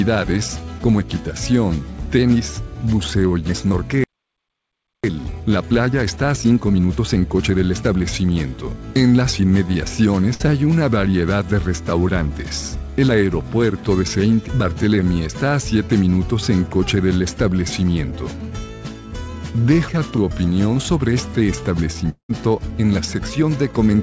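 At 4.04 s the sound just stops dead for about a second, picking up again at 5.04 s. That's a playback stall, likely the player running dry or its thread getting blocked, so output went silent until it recovered.

From 5.04 to 8.04 s you get the time-compressed catch-up: the player chews through its backlog by snipping out small pieces and cross-fading the joins, so the audio runs at about 1.25x speed with normal pitch.

Around 10.34 to 10.42 s there's a burst of packet loss. Roughly 60 ms never arrived, and the receiver papered over it by stretching the last sound for about 56 ms and fading it down before the audio jumps ahead, with that bit gone.

At 22.10 s comes a long network dropout, likely packets simply not arriving. The last sound gets dragged out as a fading buzz or hiss, then there's a short stretch of silence, and by 22.31 s the audio is back further on, with about 200 ms missing. 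The band-limiting throughout, with nothing above 8 kHz, fits a G.722 call path at 64 kbps.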